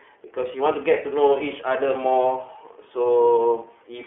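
The speech was passed through the iLBC codec, which codes each 30 ms frame's excitation independently of the frame before, at a rate that fits its 13.33 kbps mode, inside a telephone band of roughly 300 Hz to 3.4 kHz. Throughout the clip nothing survives above 3.6 kHz, so the sound is dull and boxy, and the per-frame coding leaves a plainly audible rough, slightly synthetic grain on every stretch of speech.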